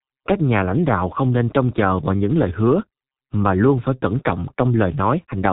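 Throughout, the speech passes through a G.723.1 codec at about 6.3 kbit/s. Nothing above 3.8 kHz survives. Heavy damage leaves it muffled and hoarse, consonants blurred.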